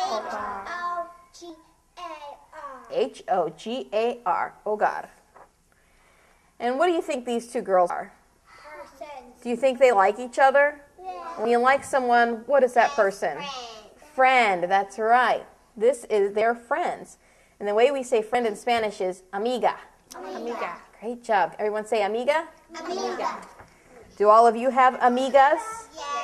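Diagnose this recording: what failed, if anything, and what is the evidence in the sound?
Compressed frames skipped at the codec or decoder stage. The audio jumps forward at 1.49, 7.89, 11.44, 16.41 and 18.34 s, losing between about 30 and 150 ms each time. Every jump spans whole 26.1 ms frames, and overlapping neighbours smear each join into a soft blip, not a click.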